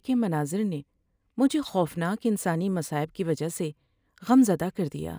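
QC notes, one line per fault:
Throughout: crude rate conversion. Samples were linearly interpolated with no proper filter, which fits a 32 kHz to 44.1 kHz change. The error, roughly 30 dB below the speech, forms unrelated tones heard as a gritty, inharmonic fizz trailing loud and bright sounds.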